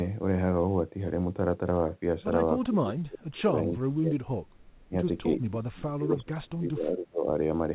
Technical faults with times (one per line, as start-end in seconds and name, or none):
2.65-4.44 speech suppressed in double talk
4.58-4.87 echo leak
4.88-4.93 speech suppressed in double talk
5.35-7.32 speech suppressed in double talk